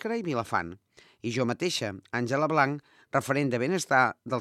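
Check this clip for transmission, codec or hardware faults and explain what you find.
No faults turn up when I check this clip.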